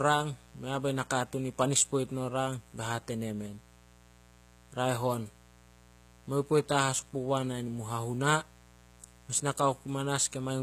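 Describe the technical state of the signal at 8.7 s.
At 8.7 s, as throughout the clip, a mains buzz sits under the speech at roughly 25 dB below it. Switching spikes at twice the 60 Hz mains rate put harmonics of 60 Hz up into the kilohertz range, giving a steady, raspy buzz.

Plainly audible codec damage also runs through this moment and the whole clip, nothing is present above 14.9 kHz, and this is likely HE-AAC compression at a low bitrate around 20 kbps. The upper band is rebuilt by spectral band replication from copied lower bands, so the treble is not the original and its harmonics do not line up across the crossover.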